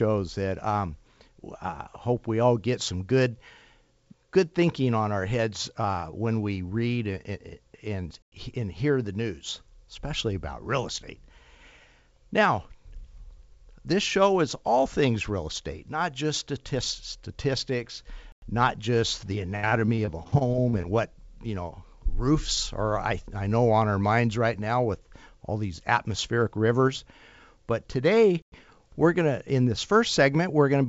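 Gap between chunks at 8.22 s, just before "and hear the news", and again at 18.32 s, just before "not just the": each time the sound stops dead for 100 ms, landing on a 10 s rhythm that points to chunked delivery, with nothing lost but the flow broken at the join.

Repeated packet loss, with its robotic sound, follows from 19.56 to 20.85 s, between "statistics not just the" and "what you know roofs". Around a dozen short dropouts, the longest 71 ms, are patched by stretching the preceding sound, so about a quarter of the stretch is filler and the result turns choppy.

A third gap between chunks hits at 28.42 s, the same 100 ms hole 10.1 s after the last.

The call path itself, which fits G.722 at 64 kbps, leaves nothing above 8 kHz.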